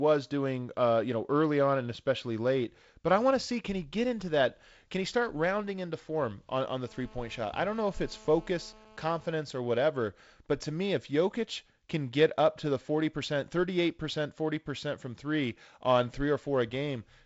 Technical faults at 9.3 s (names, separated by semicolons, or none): GSM phone buzz